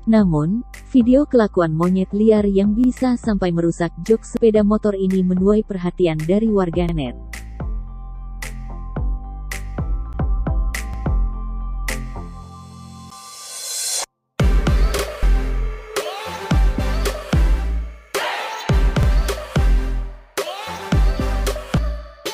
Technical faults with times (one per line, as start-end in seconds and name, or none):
2.84-2.89 overlapping chunks
4.37 damaged data in a compressed stream
6.89-6.94 overlapping chunks
10.13 damaged data in a compressed stream
10.94-10.98 overlapping chunks
13.10 damaged data in a compressed stream
15.22 damaged data in a compressed stream
19.03-19.08 overlapping chunks
21.77 damaged data in a compressed stream